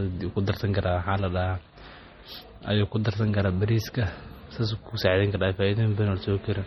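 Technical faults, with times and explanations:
Throughout, MP3 compression: watery, swirly speech with nothing above 18.1 kHz, as starved bits drop frequency lines frame to frame, likely encoded around 32 kbps.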